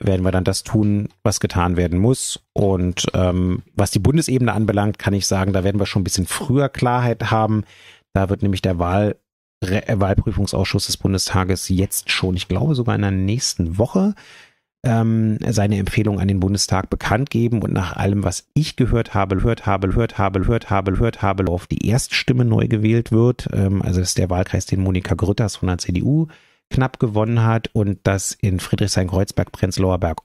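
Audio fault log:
19.39–21.47 s, broken-record loop: after "was ich gehört habe", one 0.52 s fragment repeats four times back to back, likely a stalled stream resending its last buffer, so the speech due there is lost. Waveform and spectrogram show identical blocks tiling every 0.52 s.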